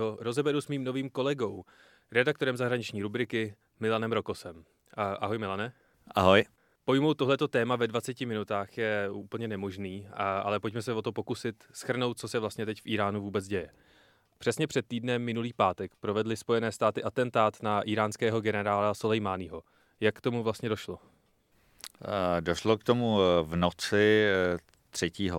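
No technical faults can be heard anywhere in this speech recording. Nothing in the sound calls for a timestamp or a comment.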